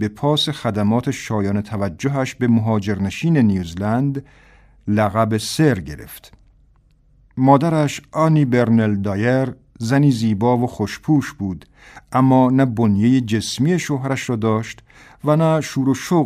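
No technical faults can be heard in this speech recording.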